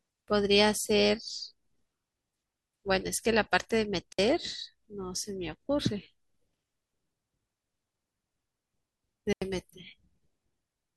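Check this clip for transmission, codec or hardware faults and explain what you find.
Two brief holes break up the speech, both digital wireless dropouts. At 4.13 to 4.19 s the audio falls to near silence for 60 ms, and at 9.33 to 9.42 s for about 88 ms. Each gap is clean, with a very quick fade and no crackle or noise burst around it. That clean cut comes from the receiver itself: when too much of the incoming data is lost, it mutes the output rather than play the corrupted stream.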